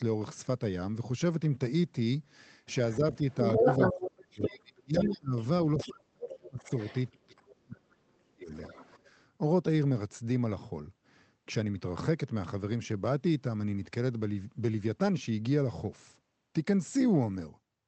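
From 2.91 to 5.9 s a second voice comes through about as loud as the main talker, and from 2.98 to 5.33 s the talker's speech is pulled down in pieces, by as much as roughly 35 dB, for about a second and a half in all. This is the other side's voice leaking through: the far end, playing on the talker's loudspeaker, likely reached the microphone and was not fully removed by the echo canceller. The overlapping dips are speech suppressed in double talk. With both sides talking at once, the canceller likely could not tell the talker from the echo and turned everything down.

The same thing happens again from 5.88 to 8.51 s. The talker drops out or sinks deeply, again around 35 dB, for roughly two seconds in total. Inside that stretch, from 6.65 to 7.8 s, fainter scraps of the other voice leak through at about 20 dB below the speech. A last faint trace follows from 8.54 to 8.98 s at about 25 dB down.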